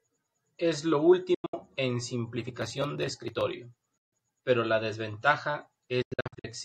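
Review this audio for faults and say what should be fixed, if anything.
Speech cuts out at 1.34–1.54 s, 3.98–4.13 s and 6.02–6.45 s, likely a Bluetooth dropout: packets missed their deadline and were discarded. The waveform shows flat holes, broken into gaps of up to 0.09 s in the first and third, and the spectrogram shows blank vertical bands. Speech resumes as if it had kept playing. Keep the headphones close and clear of 2.4 GHz interference to prevent it.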